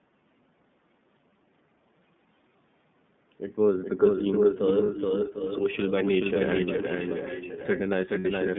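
Throughout the speech, a second copy trails the first by roughly 0.4 s, a little quieter, dry and full-band, with no room tail. That is a doubled audio track, likely from the same signal arriving again over a slower path or an edit that left two copies out of step. The whole clip is also band-limited and slightly rough and synthetic, with nothing above about 3.6 kHz and the lowest bass thinned. That is the iLBC codec, whose 30 ms frames and narrow line band cause plainly audible damage. From 4.19 to 4.59 s, 4.76 to 5.92 s, 6.31 to 7.8 s and 8.44 s to the end, another delayed copy sits 748 ms behind the voice, as loud as the speech at first and about 5 to 10 dB quieter later. That is echo leak, probably a far-end loudspeaker echo the canceller missed. At 4.86 s for 30 ms and at 8.19 s for 60 ms, the sound turns briefly into a held, buzzy vowel and recovers at once. Those are lost iLBC frames, filled in by repeating the last pitch cycle, and the second gap fits two frames.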